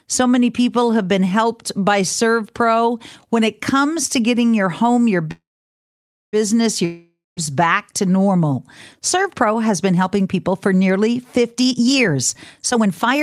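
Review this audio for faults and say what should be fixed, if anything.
Call audio freeze at 5.31 to 6.36 s, right after "getting your home your". The sound stops being fed with new audio, the last fragment is stretched into a fading buzz, and about 0.91 s of that is silence. The speech then resumes exactly where it stopped, so nothing is lost, but about 1.02 s of extra delay is inserted. The likely cause is packets held up in transit until the jitter buffer ran dry. Prevention: a larger or adaptive jitter buffer and a network path with less queuing delay would keep the buffer from emptying.

Long network dropout at 6.85 to 7.40 s, just before "back to normal". The receiver again extends the last sound as a decaying hiss for about 0.52 s, with the final 0.19 s near silent. This time the speech comes back further along, so about 0.52 s of audio is simply gone. This is likely a stretch where packets were lost outright rather than delayed. 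Prevention: forward error correction or redundancy, plus a more reliable link, would cover or avoid losses of this length.

Jitter buffer speed-up from 11.53 s to the end of the clip at 13.23 s, starting after "helping people for nearly". The speech runs at about 130% of normal rate with pitch unchanged, sounding hurried, because short pitch-period slices are cut out repeatedly to drain excess buffered audio. Roughly half a second is removed in total, undoing part of the delay built up earlier. Prevention: a gentler buffer-reduction policy that spreads the catch-up over longer time would avoid audible rushing.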